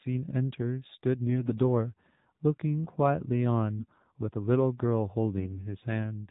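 The whole clip went through the AMR narrowband mobile codec at a low rate, which fits about 7.4 kbps. Nothing above 4 kHz survives, and the voice sounds plainly buzzy and synthetic. From 1.28 to 1.58 s and again from 3.77 to 4.04 s, AMR bit errors flipped the less protected frame bits, misplacing the excitation pulses. In those stretches the voice keeps its pitch and level but turns hoarse, scratchy and gargly.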